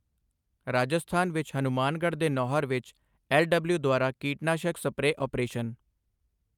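No technical faults can be heard anywhere in this speech recording. Nothing in it points to a problem in the recording or playback chain.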